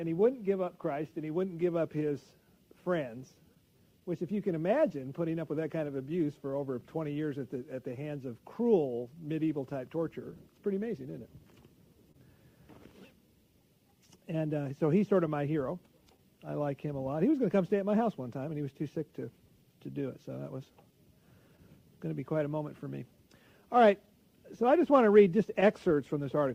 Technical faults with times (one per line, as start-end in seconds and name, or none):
0.00-26.55 clock drift between sender and receiver
0.20-25.96 repeated timing corrections
3.55-6.27 scattered short gaps
12.12-12.16 short stall from a late packet
13.92-16.20 scattered short gaps
24.72-26.55 scattered short gaps